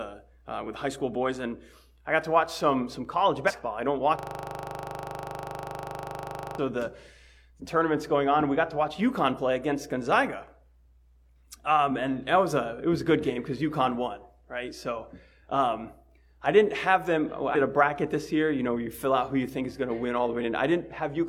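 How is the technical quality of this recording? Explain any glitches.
The recording has two kinds of technical fault, one of them lasting over two seconds.

From 3.44 to 3.51 s, 9.34 to 9.39 s and 17.51 to 17.57 s there is damaged data in a compressed stream. Corrupted bytes make the decoder misread frames and lose sync. Each event is a brief glitch while the decoder searches for the next frame header.

From 4.19 to 6.58 s there is a system hang loop. The system froze while the audio hardware kept replaying its buffer. A 40 ms slice repeats about 60 times, producing a steady 25 Hz buzzing stutter.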